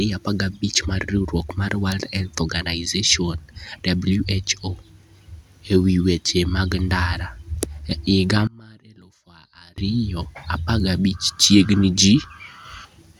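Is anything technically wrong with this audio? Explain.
Yes. From 8.47 to 9.78 s the speech drops by about 27 dB, likely because one channel is inverted, so summing to mono cancels the shared centre. Unlike a dropout, a faint residue remains.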